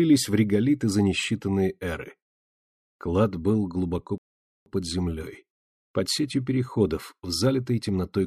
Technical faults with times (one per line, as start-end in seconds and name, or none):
4.18-4.66 rebuffering stall